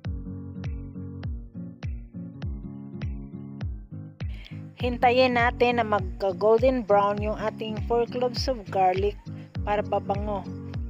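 Nothing goes wrong anywhere in the clip, so there's no technical fault to point to.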